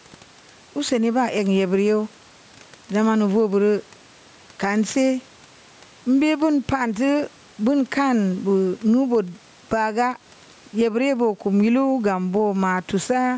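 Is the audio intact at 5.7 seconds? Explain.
No. Gain pumping runs through the whole clip, including 5.7 s. The input gain was likely set far too high, so a fast limiter pulls the level down on each loud syllable. The gain swings by around 10 dB, leaving everything squashed.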